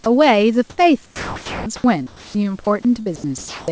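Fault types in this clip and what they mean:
Sound dropped by the voice detector: A single clipped moment from 0.04 to 0.06 s, where about 20 ms gives way to flat, steady noise and roughly 10 ms of actual speech goes missing. It is likely the sender's voice detector misjudging sound as background and pausing transmission while the receiver filled in noise. Unlike chopping, it happens once and briefly, and unlike background substitution, real speech is lost.
Comfort noise in place of the background: Between 0.70 and 0.78 s, the room's natural background, sitting about 39 dB below the loud parts, is swapped for 80 ms of smooth, featureless hiss, with a level step of about 13 dB. This is likely discontinuous transmission during a pause, with synthetic noise standing in for the real room sound. No speech is cut here. What changes is only the texture and level of the background.
Sound chopped by the voice detector: Two longer stretches, 1.06 to 2.67 s and 3.01 to 3.68 s, where the speech repeatedly cuts in and out, with about 980 ms and 432 ms respectively filled by synthetic noise. 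It likely comes from the detector toggling on and off several times. The repeated switching sets it apart from the single drop near the start.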